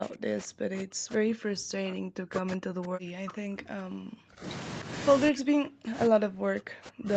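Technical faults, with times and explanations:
0.00–4.47 s and 5.31–7.16 s, speech suppressed in double talk: the voice dips by around 40 dB, likely an echo canceller ducking it during overlapping far-end talk. The waveform shows collapsed stretches, and the spectrogram shows broken, faded bands under the 8 kHz ceiling.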